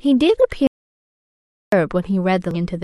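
At 0.67 s the speech cuts out mid-flow and returns at 1.72 s. That is an audio dropout to silence. The gap is silent, with no room tone, and about 1.05 s of speech is lost. The input signal was likely lost while the recorder kept writing zeros.

From 2.51 to 2.56 s a short glitch breaks in. This is damaged data in a compressed stream. Corrupt bytes made the decoder misread frames and lose sync. It then hunted for the next valid frame header.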